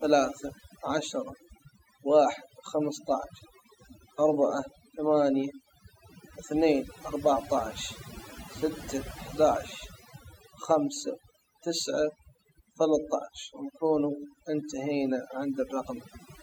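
Across the whole speech clip the background drops to near silence dotted with twinkling specks: overdone noise removal, with bands near the noise estimate cut away.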